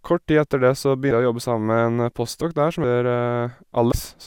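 Speech with compressed frames skipped in three places. Right after "tid etter det så" at 1.11 s, and again at 2.83 s, the audio jumps ahead by roughly 150 ms, and at 3.91 s by about 100 ms. Whole frames went missing or were rejected by the decoder, and the jumps fit around seven and five frames of a 24 ms codec.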